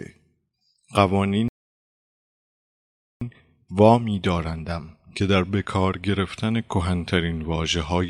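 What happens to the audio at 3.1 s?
At 3.1 s the speech is silent inside a playback stall from 1.48 to 3.21 s, likely the player starving for data or being blocked, showing as a flat, empty gap in the waveform and spectrogram.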